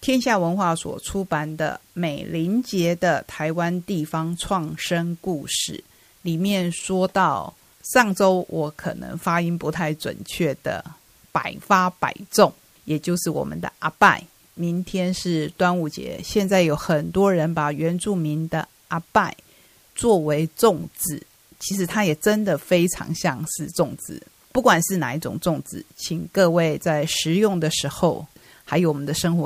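Low bit depth with dither runs throughout. The speech sits on about nine bits, so dithered rounding leaves a steady, even hiss roughly 35 dB down, without distortion.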